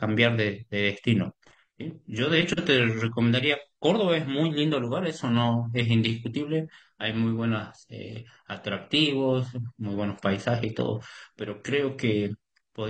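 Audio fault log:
1.43–12.9 s, adaptive stream at a lower bitrate: the speech drops in quality suddenly, with no gap. Nothing comes through above 9.1 kHz after that, and codec artefacts rise. That fits the player switching from a 96 kbit/s AAC stream to a 24 kbit/s one as the connection slowed.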